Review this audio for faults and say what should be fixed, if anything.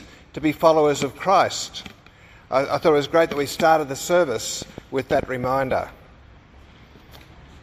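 A train of clicks runs from 4.62 to 5.72 s: about seven similar pulses, unevenly spaced at roughly 6.4 per second, peaking well above the programme level. Likely interference or an unstable interface injecting pulses. Shield cables, separate nearby equipment, and check interface connections and drivers before recording.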